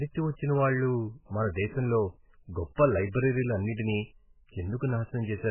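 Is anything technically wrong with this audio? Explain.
Yes. Throughout, the speech has heavy watery, swirling damage. This is likely MP3 compression starved of bits, fitting about 8 kbps. Weak frequency lines drop in and out between frames.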